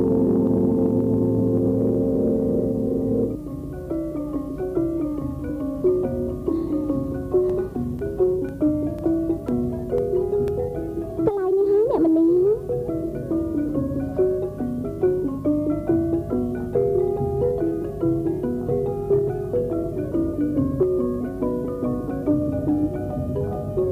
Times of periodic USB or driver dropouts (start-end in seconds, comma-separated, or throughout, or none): 7.50-10.48